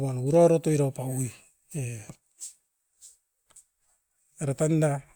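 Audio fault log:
No audible faults in this speech recording.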